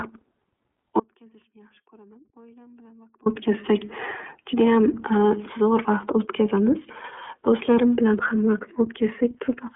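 iLBC codec artefacts run through the whole clip. The speech is coded in independent frames with a rough, slightly synthetic texture that fits 30 ms iLBC frames at about 13 kbps. Everything above about 3.6 kHz is gone, leaving a thin, telephone-like band.

An audio dropout to a faint residue follows from 1.00 to 3.26 s, a gap of about 2.26 s. The speech cuts out abruptly, and only a faint leak of sound remains, roughly 30 dB below normal level. This is likely a break in the signal while the path after it stayed live.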